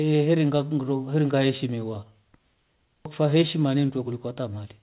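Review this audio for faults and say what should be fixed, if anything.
Nothing in this audio needs to be fixed, as no faults can be heard.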